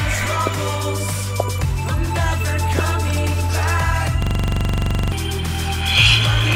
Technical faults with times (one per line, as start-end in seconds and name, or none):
4.22-5.12 system hang loop